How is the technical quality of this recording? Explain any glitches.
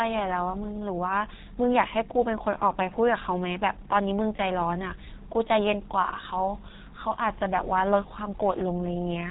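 The recording is fairly rough, with G.723.1 codec damage running the whole way through. It sounds like an old VoIP call: nothing above 3.8 kHz, and a slow-updating, low-rate model (consistent with roughly 6 kbit/s) that leaves the speech muffled, hoarse, and smeared at the consonants.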